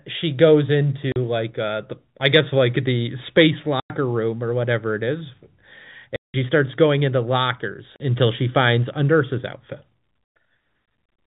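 Packet loss filled with silence breaks up this speech recording at 1.12–1.16 s, 3.8–3.9 s, 6.16–6.34 s and 7.96–8.0 s. Those holes last 40, 100, 180 and 40 ms, all multiples of 20 ms, which suggests 20 ms packets dropped in transit and replaced by dead silence with hard edges. Above 4 kHz nothing comes through, as expected of the G.711 telephone coding it is carried in.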